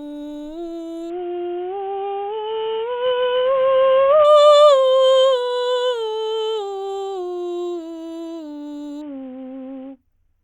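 From 1.10 to 4.25 s, and again from 9.01 s to the end, the music turns dull and gritty as its treble falls away. This is a Bluetooth SBC bit pool drop: a congested link forced a bitrate cut, consistent with a bit pool falling from 28 to 5.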